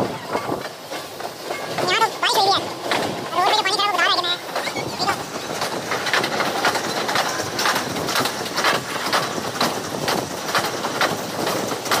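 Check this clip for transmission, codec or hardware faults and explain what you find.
The clip has one fault, present from start to finish. Audio read two samples at a time (double speed), throughout: the reader treats each pair of samples as a single frame, as if expecting two channels or wider samples. Playback therefore runs twice as fast and 12 semitones (an octave) higher.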